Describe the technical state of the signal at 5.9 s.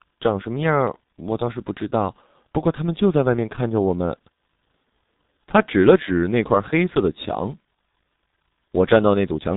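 G.723.1 codec damage runs through the whole clip, including 5.9 s. Its 30 ms frames and slow speech model, which fit a rate near 6 kbit/s, leave nothing above 3.8 kHz, so the speech sounds muffled and hoarse, with smeared consonants.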